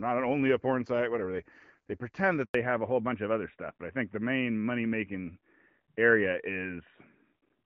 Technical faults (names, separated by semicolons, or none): handover gap; fallback to narrowband